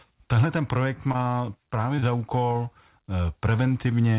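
At 1.12 to 1.24 s, and again at 1.96 to 2.00 s and 2.00 to 2.04 s, the speech shows short concealed packet loss. Each time about 20 ms of audio failed to arrive, and the receiver bridged the gap by extending the preceding sound before blending back. The back-to-back pair near 2 s gives a brief smeared wobble, and the first adds a few milliseconds of delay. The band stops at 4 kHz, which fits G.711 A-law telephony coding.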